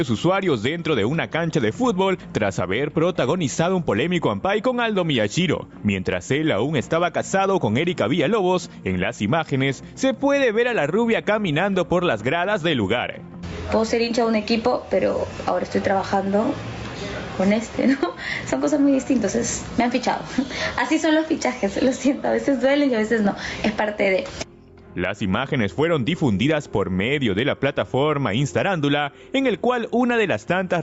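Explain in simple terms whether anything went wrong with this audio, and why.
Gain pumping throughout: loud and soft parts end up closer in level and the sound is squashed, likely from the mic gain being set far too high.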